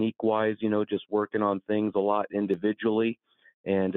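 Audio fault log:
Throughout: noise suppressor applied to music or sounds. A speech-oriented suppressor stays active across the whole clip and treats held, steady material and ambience as noise. Its gain keeps moving as it decides what to keep, so level swings by around 5 dB. Onsets pass largely intact, but sustained parts and decays are pulled down. The result is a pumping, fluttering quality and a thinner, drier sound than the source would have.
3.15 to 3.66 s: sound cut by the noise suppressor. Here the suppressor misreads the sound as noise and clamps down much harder than elsewhere, with the deepest drop reaching about 16 dB. The heavy attenuation adds up to roughly a couple of hundred milliseconds within this stretch. Steady or fading portions sink sharply and their tails are chopped short, while sudden attacks mostly get through. The passage audibly dips and loses body before the level recovers.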